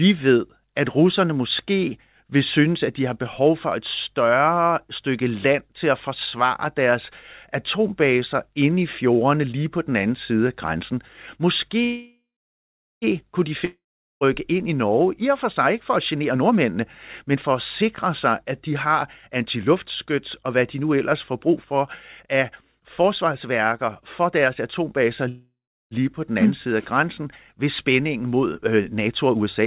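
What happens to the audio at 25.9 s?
At 25.9 s the sound is ending a call audio freeze that began at 25.29 s. The last sound smears into a fading buzz or hiss, then goes silent for about 350 ms. It resumes where it stopped, 0.63 s late, with nothing lost. Delayed packets likely emptied the jitter buffer.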